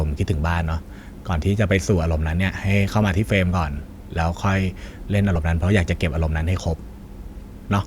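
At 5.35 s the speech is broken by a brief chirp. This is a corrupt frame decoded. Bits inside one compressed frame were flipped in transit or storage. The decoder did not reject the frame. It played it anyway. Damaged gain values and misread codes sent energy to the wrong frequencies. The result lasts only about one frame, roughly 20 ms. It peaks around -10 dBFS and sounds like a short squeaky blip.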